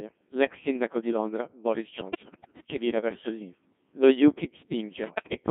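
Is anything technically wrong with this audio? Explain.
Yes. The whole clip has passed through a Codec 2 vocoder, at a rate that sounds near 1.6 kbit/s. Only pitch, voicing, energy and spectral shape survive, so the speech is resynthesised as buzzy, robotic tones, band-limited to 150 Hz to 3.5 kHz.

Bit errors on digital voice radio strike from 1.96 to 2.64 s, just before "che vira verso il", and again from 5.04 to 5.34 s. Corrupted frame parameters make pitch, level and timbre jump into warbling gibberish, harsher in the second burst.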